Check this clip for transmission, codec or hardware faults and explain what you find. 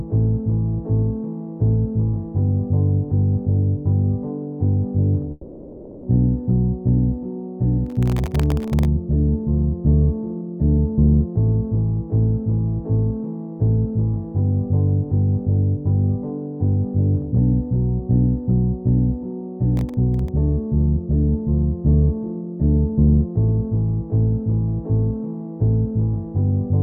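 Two kinds of fault are present: a long network dropout and two bursts of processor overload crackle.

From 5.31 to 6.05 s there is a long network dropout. For roughly 0.72 s the audio is replaced by a smeared continuation of the preceding sound that never drops to silence, and the material from that stretch is gone when normal playback resumes. The likely cause is a run of lost packets: the receiver's concealment kept extending the last sound across the whole gap rather than going quiet.

Processor overload crackle appears from 7.87 to 8.85 s and again from 19.77 to 20.28 s. Audio is processed in very short blocks, each well under a millisecond. When the processor cannot finish a block in time, it outputs silence for that slot. The first burst contains several dozen of these missed blocks and the second about ten. Each one cuts a hard-edged hole in the signal, and together they produce a gritty, tearing crackle over the sound that stops once the load clears.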